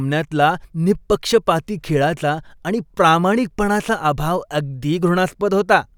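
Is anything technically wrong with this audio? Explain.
No, the speech signal shows no technical faults at any point.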